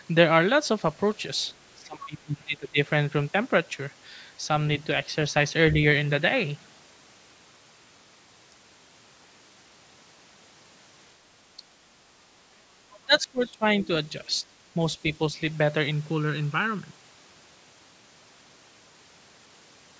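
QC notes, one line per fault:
1.82–2.79 s, 11.57–11.63 s, 13.0–13.65 s, 14.74–14.8 s: speech suppressed in double talk. The talker's level sinks abruptly and recovers, deepest in the first dip (about 25 dB, nearly a second long), about 20 dB over the half-second at 13.0 s, and only about 10 dB and 5 dB in the brief 11.6 s and 14.8 s nicks. The likely cause is an echo canceller ducking the near talker while the far side spoke. On a waveform the envelope pinches down; on a spectrogram the harmonics fade as whole bands.
12.93–12.98 s and 13.15–13.21 s: other side's voice leaking through. Two short scraps of a second voice slip past, each around 50–60 ms and faint, roughly 30 dB below the talker, the first just before and the second inside the 13.0 s suppression. This is likely residual loudspeaker echo the canceller failed to subtract from the microphone. On a spectrogram they appear as thin, isolated smudges of energy with a different harmonic pattern than the main talker, too short to form syllables.
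15.91–16.91 s: channel delay (comb filtering). For one second the sound turns hollow and phasey. A lag of about 0.7 ms between channels, summed to mono, cancels shared content at evenly spaced frequencies: the first notch near 700 Hz, then roughly every 1.4 kHz above it (2.1 kHz, 3.5 kHz and so on). On a spectrogram this shows as horizontal dark stripes across the voiced energy, starting and stopping sharply at the segment edges. The spectrum is empty above 8 kHz from the call's microphone path.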